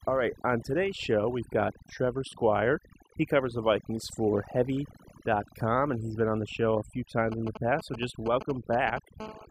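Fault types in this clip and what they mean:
Overdone noise removal, throughout: the noise reduction was pushed so hard that individual frequency bands are pulled far down or shut off whenever they sit close to the tool's noise estimate. The background between phrases collapses to near silence dotted with twinkling specks, and the softer parts of the speech are cut along with the noise.
GSM signalling bursts, 7.32 to 8.99 s: starting just after "the show a few", a nearby 2G phone sends short groups of radio bursts while signalling rather than holding a call. The audio circuit rectifies these pulses into sound, producing a galloping dit-dit-dit of brief buzzes at the 217 Hz burst rate, sitting around 10 dB below the speech.
GSM phone buzz, 9.20 to 9.46 s: here the phone is in call mode, bursting 217 times a second, and the rectified pulses become a hard, raspy buzz at 217 Hz packed with harmonics. 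It is steady through this short stretch near the end, has no relation to the speech, and sits about 13 dB below it.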